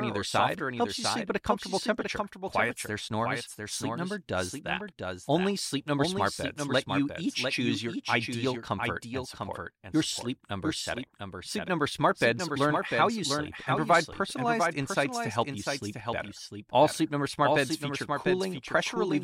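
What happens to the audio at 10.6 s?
At 10.6 s a doubled audio track runs, as it does throughout: a dry, undecayed copy trails about 0.7 s behind, a few dB quieter, likely from a second capture path. Unlike an echo, it has no room colour.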